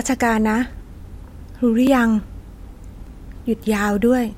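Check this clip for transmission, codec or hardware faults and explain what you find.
The speech carries one kind of fault, a block of digital silence, at 0.73, 1.87 and 3.07 s. The gaps, about 0.27 and 1.33 ms (the latter fitting 64-sample blocks), drop abruptly to silence, likely when the output buffer goes unfilled, giving sharp ticks rather than the softened edges of concealed packet loss.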